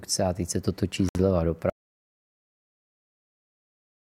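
At 1.09 s, just after "teď se to točí", a gap at a join of encoded pieces opens for about 63 ms. Untrimmed encoder padding leaves silence with smeared edges, and the speech then resumes where it stopped. From 1.70 s to the end, an audio dropout to silence follows, likely from lost input. It is silence with no room tone, and unlike the join gap the speech never returns.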